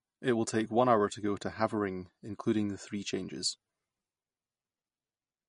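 From start to finish the speech carries plainly audible MP3 compression, likely from an encoder starved of bits, which fits a bitrate around 40 kbps. Nothing remains above about 10.6 kHz, so the top is sliced off at a fixed point. What sets it apart from a simple low-pass filter is the watery, swirling texture: weak frequency lines drop in and out frame by frame, giving s sounds a metallic chirp and smearing consonant attacks.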